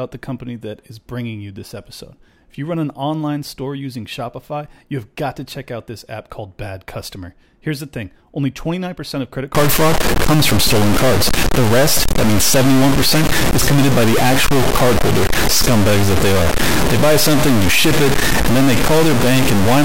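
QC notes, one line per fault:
9.55 s to end: stuck bit. Speech turns harsh and buzzy because roughly half the samples are offset by a step of around -10 dBFS, which points to a fairly high-order bit. It is likely a broken data line or converter. Pauses fill with loud noise as the bit flips with the sign of low-level samples.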